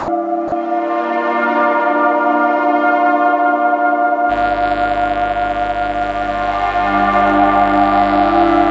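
From 0.0 to 0.08 s and again from 0.48 to 0.52 s, the sound briefly gives way to a flat, steady noise floor before returning. This is likely sound dropped by the voice detector, which judged those moments to be background and had comfort noise played in their place. From 4.27 s to the end, a steady, raspy mains buzz sits about 15 dB below the sound. It is built on 50 Hz harmonics, produced by sharp switching spikes entering twice per mains cycle, and the harmonics reach up into the kilohertz range. The audio carries no content above 8 kHz, which fits the G.722 call codec.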